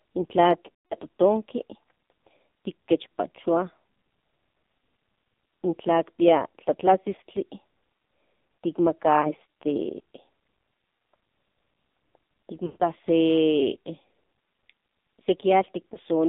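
Speech recorded through an AMR narrowband mobile codec with heavy coding damage. The audio sits in a 200 Hz to 3.7 kHz band with nothing above. The buzzy, synthetic quality points to one of the lowest AMR-NB modes, around 6 kbps, where each 20 ms frame carries only a vocal tract model and a few excitation pulses. Everything that model cannot represent is discarded, so the voice sounds thin and artificial. Lost AMR speech frames then break up that signal at four points. From 0.68 to 0.97 s a run of roughly 220 ms of frames is missing. The decoder keeps repeating the last good pitch and vocal tract settings while lowering their gain, so the sound drags and fades toward silence before it recovers, weak or rough. A shorter run from 12.66 to 12.83 s, about 140 ms, produces the same stretched fade. Brief dips or warbles at 9.22 to 9.33 s and 15.94 to 15.97 s fit a single concealed frame each time.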